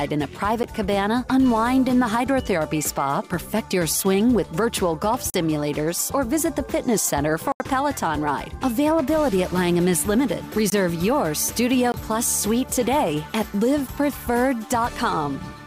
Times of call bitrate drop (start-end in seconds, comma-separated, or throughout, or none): none